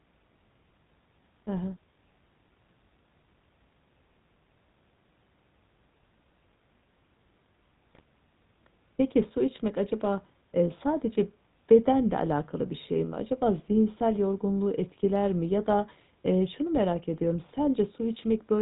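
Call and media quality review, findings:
GSM full-rate codec coding throughout. Buzzy, gravelly roughness on all speech and plainly audible damage. Nothing above 4 kHz. The vocal-tract model is driven by a coarse pulse excitation that keeps one sample in three, which fits the 13 kbps full-rate codec.

GSM bit errors, 7.90 to 8.01 s. A brief squawk and gargle breaks the speech. Corrupted filter, pitch or gain values reach the decoder, bending the spectrum frame by frame. The span fits about five 20 ms frames hit on a weak radio link.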